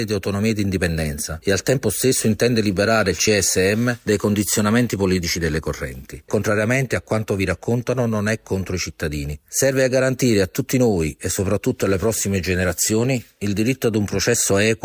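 No technical faults can be heard anywhere here.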